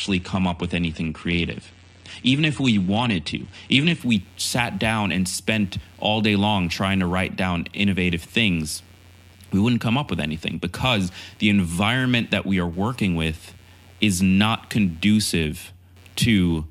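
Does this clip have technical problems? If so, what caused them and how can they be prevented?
Yes. From the start to 4.0 s the speech sounds dull and slightly swirly, with nothing above 9.7 kHz, then suddenly brightens without any gap. This is an adaptive stream starting at a low bitrate. The player opened on a cheap version, which fits AAC-LC at about 32 kbit/s, while it measured the connection, then stepped up to something like 96 kbit/s. To prevent it, start playback on a higher rung or buffer briefly before playing.

Throughout the clip a faint buzzing pulses at roughly 150 Hz, far below the speech, and rises and falls independently of it. This is computer activity noise: changing processor, graphics or mouse load shifts the ground shared with the audio circuit. To prevent it, use an external or isolated audio interface, or a ground-loop isolator.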